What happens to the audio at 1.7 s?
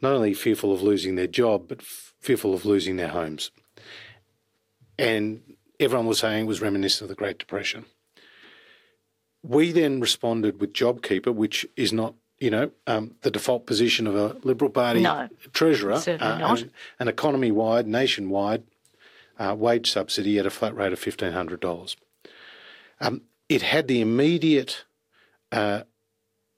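Nothing goes wrong at 1.7 s; the speech there is intact, with no dropout, click, distortion or other fault.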